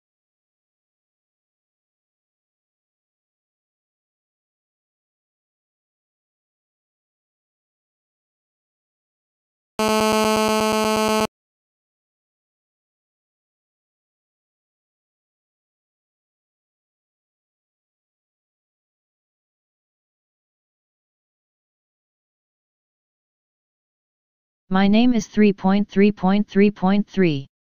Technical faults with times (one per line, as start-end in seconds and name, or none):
9.79-11.26 GSM phone buzz